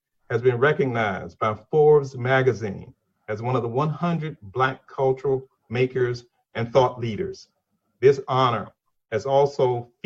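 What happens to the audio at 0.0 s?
Nothing goes wrong at 0.0 s; the audio is intact at that moment.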